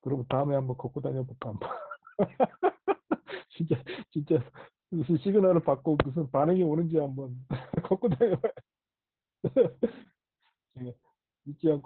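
Opus voice compression runs through the whole clip. The band is narrowed, with nothing above 4.3 kHz. The excitation is coded coarsely. The speech sounds muffled, hoarse and slightly robotic. The heavy damage fits SILK mode at a bitrate near 8 kbps.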